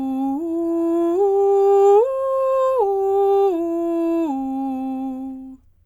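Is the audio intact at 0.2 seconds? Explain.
Yes, the music plays cleanly at 0.2 seconds, with no fault at that moment.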